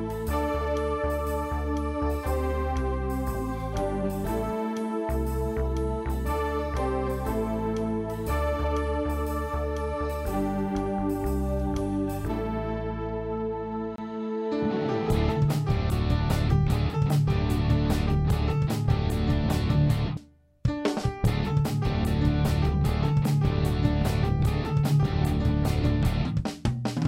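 CD skips at 13.96 to 13.98 s and at 20.17 s: the laser jumped tracks on the disc's spiral, giving a brief mute, a tick, and an abrupt jump in the audio.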